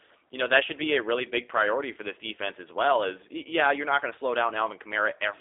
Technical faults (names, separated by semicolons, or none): G.729 codec